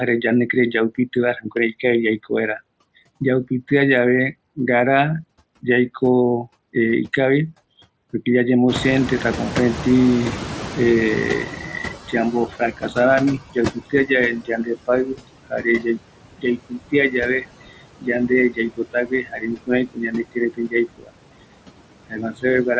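Noise suppressor artifacts run through the whole clip: the suppressor pulls steady background down by about 21 dB frame by frame, so the residue sinks in pauses and swells under speech, unlike plain low-level hiss, which would stay constant.

Speech cut by the noise suppressor occurs at 0.95–1.84 s, 12.52–12.97 s, 13.53–14.1 s, 14.42–15.86 s, 16.38–21.12 s and 22.09–22.66 s. Soft consonants and endings mistaken for noise drop by up to about 22 dB and sound swallowed. This differs from a dropout because the surrounding speech stays intact.

At about 8.5 s the room noise jumps by about 21 dB, and from 8.68 to 13.42 s the noise suppressor is catching up. Its noise estimate lags, so the louder background leaks through at first and then fades gradually over about 4.7 s instead of vanishing abruptly.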